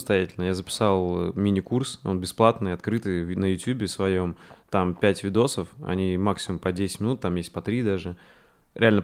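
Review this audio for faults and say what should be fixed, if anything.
Nothing to fix here; no faults are audible anywhere in the recording.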